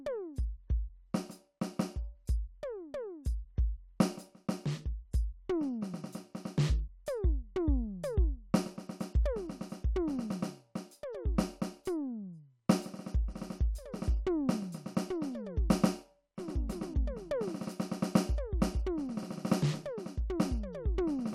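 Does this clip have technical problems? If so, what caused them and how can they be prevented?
No, this music clip has no technical problems, so there is no cause to explain and nothing to prevent.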